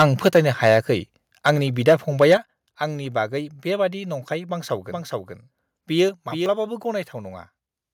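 It's a speech clip with a few level problems. Microphone overload shows up from 0.00 to 0.77 s, again at 1.46 to 1.50 s, 1.87 to 1.94 s and 2.21 to 2.34 s. The tops of the loudest peaks are flattened, up to about 10 dB past the converter's limit at the start and about 3 to 4 dB later, giving a harsh crackle. The likely cause is an input gain set too high for the converter. The microphone volume stepped down three times, at 0.28 s by about 4 dB, at 2.37 s by about 8 dB and at 6.09 s by about 3 dB. Voice and background drop together at those points, which likely means the call software's automatic gain control was pulling the input back. From 4.88 to 6.46 s there's a doubled audio track. A full-band copy sits around 5 dB down and roughly 400 ms behind, with no room colour, and it cuts in and out abruptly. That's likely a second, slower capture path mixed in with the main one.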